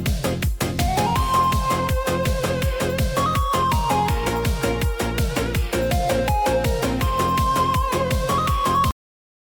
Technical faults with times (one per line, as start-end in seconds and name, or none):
8.91-9.49 cut-off end